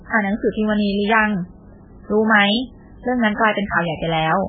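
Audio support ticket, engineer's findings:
Speech band-limited for the full clip, nothing above 4.5 kHz, sibilants dull and clipped. Heavy watery, swirly texture as weak spectral lines switch on and off frame to frame; consonant attacks smeared. Likely MP3 compression at a very low bitrate, the damage pointing to roughly 8 kbps: encoder starved of bits, treble cut at a fixed frequency and low-level detail zeroed.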